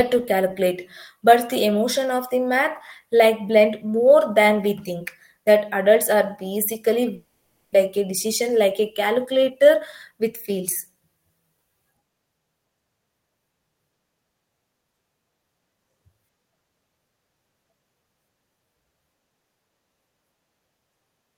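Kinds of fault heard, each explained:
Long network dropout: around 7.15 to 7.76 s the sound smears into a fading buzz for about 0.6 s, likely lost packets, and resumes with roughly 0.4 s missing.
Jitter buffer speed-up: from 7.86 to 10.58 s the receiver trims tiny pitch-period chunks to shed a backlog of roughly 150 ms, so speech runs about 6% faster at unchanged pitch.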